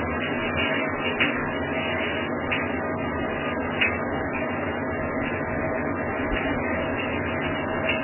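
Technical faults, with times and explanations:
Throughout, MP3 compression: nothing above 3 kHz remains, and the sound is watery and swirly, with smeared attacks. This likely comes from heavy MP3 encoding near 8 kbps, which forces the encoder to cut the treble and switch weak frequency lines on and off.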